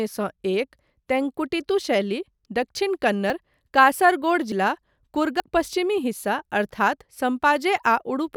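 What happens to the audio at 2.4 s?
Nothing goes wrong at 2.4 s: the speech carries on cleanly through that moment, with no dropout, click, distortion or other fault.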